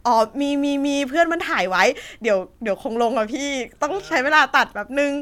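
Nothing goes wrong anywhere in this bit of speech, so there's no fault to point to at any moment.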